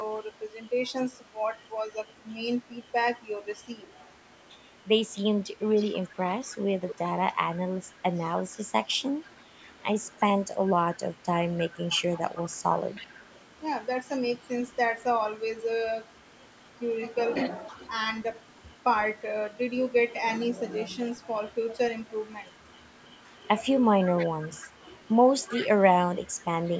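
A delayed copy of the speech keeps creeping back in, spaced about 317 ms behind the original. That's echo leak, likely from a far end on speakerphone whose echo canceller didn't catch everything. It shows up at 5.76–6.99 s, 8.51–9.37 s, 11.58–13.4 s, 17.6–17.89 s, 21.13–25.68 s and 26.26–26.42 s. Mostly it's a faint ghost, but the long stretch from 21.13 s is the loudest, only about 15 dB under the speech.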